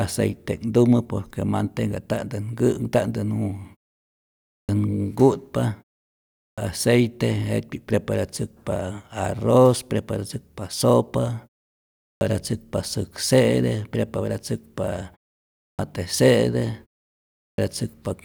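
At five points where the speech resumes after a short pause (4.39, 6.32, 11.95, 15.51 and 17.29 s), the output comes back late, giving a clipped start after a pause: roughly a quarter to a third of a second goes missing, so the words jump in abruptly without their openings.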